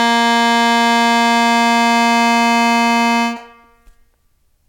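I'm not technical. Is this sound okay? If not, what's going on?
Yes, this music clip has no audible faults.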